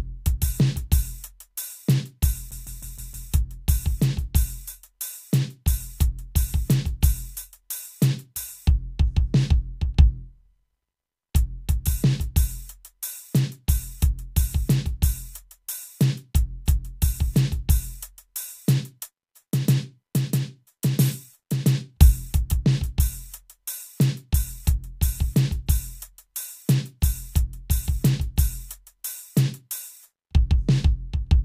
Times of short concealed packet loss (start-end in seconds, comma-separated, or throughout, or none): none